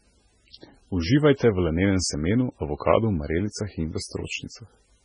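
Likely heavy MP3 compression at a very low bitrate runs across the whole speech clip, which fits around 16 kbps, removing everything above 10.4 kHz and leaving watery, swirly artefacts.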